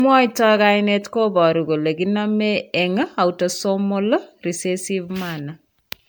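From start to finish the speech has a swirly, hollow, smeared quality, with blurred attacks, worse than a single pass at around 130 kbit/s MP3 would give. That's generation loss, likely from about ten rounds of MP3 decoding and re-encoding.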